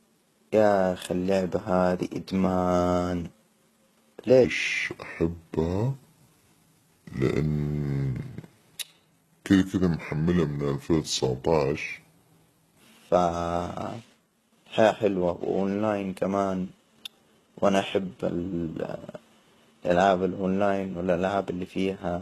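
Heavy HE-AAC compression, most likely, runs through the whole recording: the codec coded only the lower spectrum and rebuilt the treble by copying lower bands upward, which fits a very low bitrate near 16 kbps. Nothing survives above 12.3 kHz, and s sounds come out gritty and metallic.

From 4.44 s to 12.81 s a section at the wrong speed plays, likely from being fitted to the wrong clock, at about 0.72 times normal speed. Pitch and pace drop together by roughly five semitones, so the speech turns deep and dragging until it snaps back.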